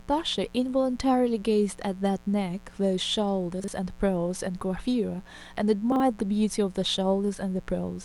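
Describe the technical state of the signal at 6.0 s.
Around 6.0 s there is a brief jumbled moment, from 5.92 to 6.0 s. This is chunks out of order: a 40 ms chunk of audio came through one chunk late and so plays after the piece that should follow it. No sound is missing, but the sequence is scrambled, and there are three abrupt joins where the misplaced chunks meet.

Under that, and throughout the clip, a steady raspy buzz sits roughly 25 dB below the speech. This is mains buzz at 60 Hz. Sharp switching spikes from a dimmer, a rectifier or an unshielded path enter the signal twice per mains cycle. That spiky waveform carries harmonics of 60 Hz up into the kilohertz range, which gives the buzz its rough, edgy quality rather than a pure low hum.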